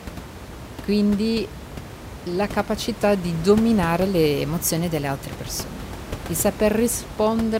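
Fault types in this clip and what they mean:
No technical faults are audible in this clip.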